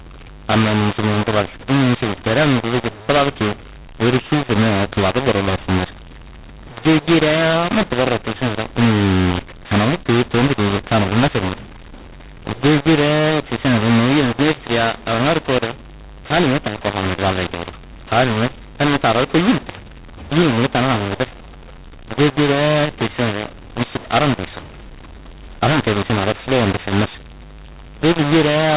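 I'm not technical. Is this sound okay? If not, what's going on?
No. From start to finish, the speech sounds harsh and gritty, and the gaps between phrases fill with a steady hiss instead of going quiet. This is a mu-law and A-law mix-up: the phone audio was stored in the mu-law format but played back as A-law, so loud and soft parts come out at the wrong sizes. A merely poor phone line sounds muffled. This sounds broken and noisy, even in silences.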